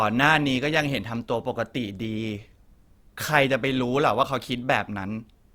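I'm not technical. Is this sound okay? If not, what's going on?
No. Through the speech there are sharp ticks, about four of them, one roughly every one and a half seconds, from 0.63 s to 5.17 s. These are word clock ticks. Two pieces of digital equipment were passing the sound between them while each kept its own timing, and their clocks differed very slightly, by around fifteen parts per million. Each time that tiny gap added up to a whole sample, one sample was dropped or repeated, which produced a tick.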